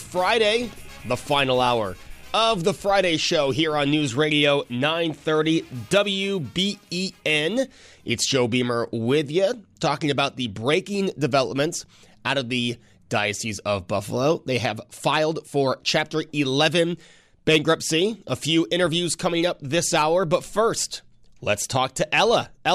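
No technical faults are audible.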